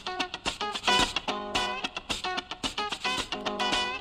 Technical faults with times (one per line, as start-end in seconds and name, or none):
0.82-1.26 sudden gain jump